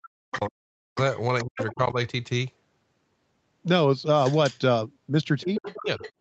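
A speech recording in which the echo canceller likely failed during double talk, treating the talker as echo while both sides spoke. The result is speech suppressed in double talk from 0.0 to 0.97 s and 1.43 to 1.97 s, with drops near 40 dB, and from 5.43 to 6.03 s, dipping about 20 dB, so the voice fades and cuts out in pieces. The same canceller likely left some of the loudspeaker signal in the microphone, so the other side's voice leaks through at 0.31 to 0.38 s, 0.96 to 1.74 s and from 5.41 s to the end. This second voice sits roughly 10 dB under the talker, and about 15 dB under in the last stretch.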